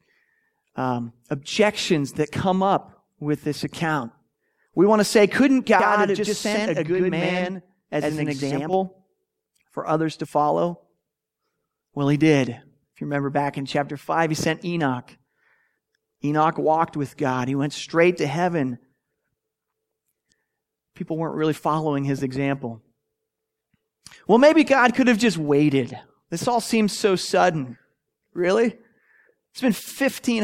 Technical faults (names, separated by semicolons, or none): channel delay (doubling)